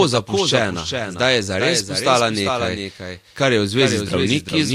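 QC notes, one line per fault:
Throughout: doubled audio track. Every syllable of the speech returns about 400 ms later as a second full-band copy, roughly 5 dB quieter, with no decay tail or room colouring, so it reads as a stuttering double rather than an echo. It is likely caused by the signal being captured twice, once through a slower path. On a waveform each burst has a smaller identical twin offset by 0.4 s, and a spectrogram shows every band pattern repeated at that fixed lag.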